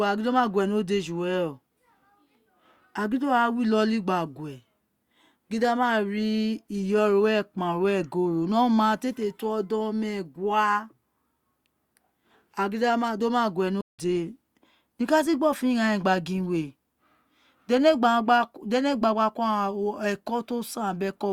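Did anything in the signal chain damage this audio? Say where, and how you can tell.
Yes: a playback stall at 13.81 s to 13.99 s, where the speech falls silent for about 0.18 s, likely from the player running short of data. A clean gap, not a click or burst of noise.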